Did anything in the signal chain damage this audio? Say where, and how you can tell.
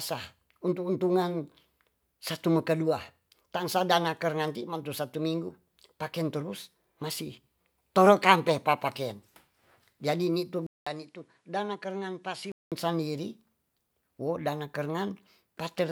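Yes. At 10.67 s the speech drops out for about 200 ms. It returns duller and quieter, by around 10 dB. Until 12.72 s nothing reaches above 11.4 kHz, and a different background noise sits roughly 45 dB under the speech. These changes point to the input stage. The system most likely had its input switched to a poorer device, another microphone or a headset's call profile, with its own narrower band, gain and noise.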